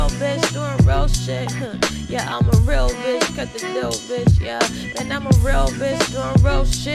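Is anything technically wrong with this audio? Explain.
No, nothing technically wrong stood out on listening to this audio.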